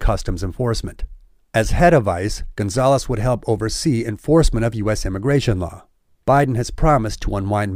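No technical faults are audible.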